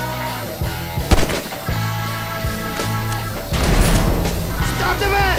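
A thin, high whistle sits under the sound from start to finish, wandering between about 13.3 and 13.6 kHz and riding roughly 20 dB below the main signal. This is switching supply whistle: a switching power supply in the chain is dropping into an audible burst mode or beating against another supply, and its pitch shifts within that narrow band as the load on it changes.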